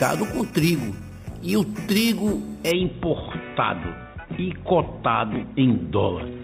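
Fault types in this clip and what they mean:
Imaging from sample-and-hold upsampling: samples were repeated unsmoothed when the rate was raised, leaving a metallic fizz mirrored between 4 and 8 kHz, about 15 dB down.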